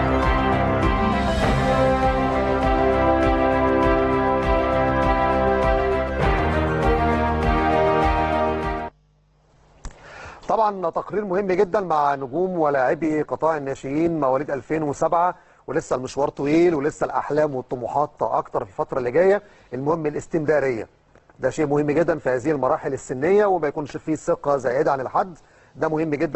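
At 8.87 s the audio drops abruptly to an adaptive stream at a lower bitrate and stays there to the end. The connection likely slowed, so the player switched to a leaner version. Content above 8.1 kHz vanishes and codec artefacts thicken, a step that points to moving from roughly 64 kbit/s Opus to about 12 kbit/s. Unlike a rebuffering stall there is no gap, and unlike a plain low-pass filter the sound also turns smeared.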